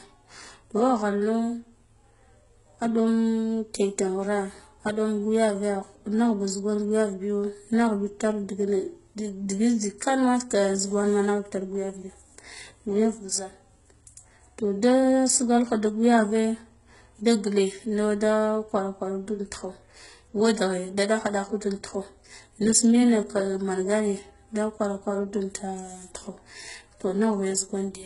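From start to finish the speech carries heavy codec damage, likely from HE-AAC compression. Nothing is present above 11.1 kHz, and the treble below that edge sounds synthetic: a low-rate core codes only the lower band, and spectral band replication rebuilds the top by copying lower bands upward under a coarse envelope. Harmonics fail to align across the crossover, so s sounds come out gritty and lispy. The depth of the damage points to a very low bitrate, on the order of 12 kbps.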